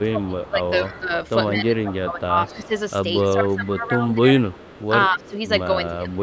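Speech from a call, with two faults. An echo leak runs from 0.00 to 3.25 s and from 4.48 to 5.30 s. A delayed copy of the speech trails by 211 ms, roughly 20 dB down at first, then near 25 dB down. Likely cause: the far-end echo canceller let its loudspeaker pickup through. Speech suppressed in double talk occurs from 0.02 to 2.71 s, 3.35 to 4.35 s and 5.09 to 6.18 s. The talker dips by up to roughly 15 dB, in pieces totalling about 1.5 s, 0.7 s and 0.5 s. The likely cause is an echo canceller turning down its own talker along with the loudspeaker echo during overlapping talk. The band stops at 8 kHz.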